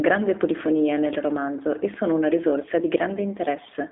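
From start to finish the speech carries G.729 codec damage, plainly audible. The sound is narrowband, confined to roughly 300 Hz to 3.6 kHz, with nothing above 3.8 kHz. The codec rebuilds each 10 ms frame from a vocal tract filter, a pitch predictor and a few coded pulses. Detail between those parameters is lost. Speech stays intelligible but sounds rough and synthetic. The texture fits an 8 kbit/s G.729A stream.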